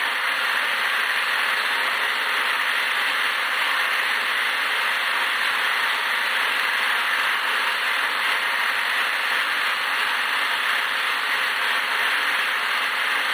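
No technical faults can be heard anywhere in this audio. Nothing in it calls for comment from a playback or transmission standpoint.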